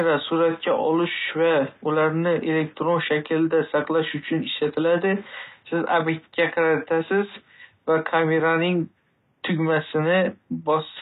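All the way through, the speech has plainly audible damage that's likely HE-AAC compression, and the sound fits a low bitrate of around 20 kbps. The treble is rebuilt from copied lower bands, so harmonics don't line up across the crossover and s sounds come out gritty, metallic or lispy. The room noise sits about 46 dB below the speech.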